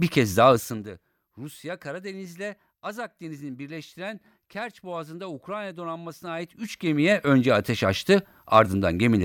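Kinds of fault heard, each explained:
Zipper noise: the level moves in raw 2 dB jumps with no smoothing, so each jump ticks. Just after "bir kez daha", 0.5 to 0.89 s, it drops roughly 20 dB as a quick zip; 6.21 to 7.31 s climbs back with slower ticks.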